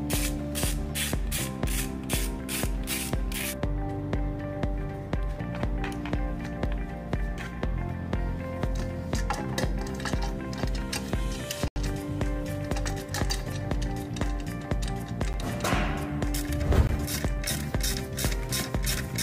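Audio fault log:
11.68–11.76, 15.33, 16.87–16.89 s: block of digital silence. Three dropouts of 80, 11 and 20 ms, each a hard cut to zero and back, likely from buffer underruns.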